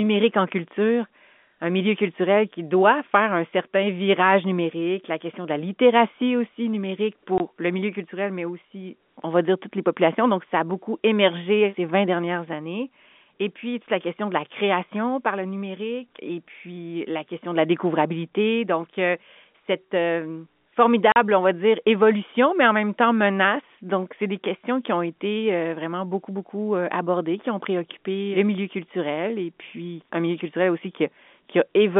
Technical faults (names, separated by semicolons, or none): packet loss filled with silence